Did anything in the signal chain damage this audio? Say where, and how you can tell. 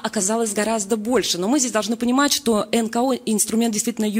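No, nothing in the chain audibly damaged it.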